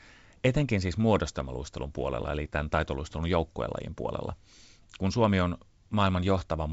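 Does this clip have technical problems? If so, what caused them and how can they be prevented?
No, this clip has no technical problems, so there is nothing to trace to a cause or prevent.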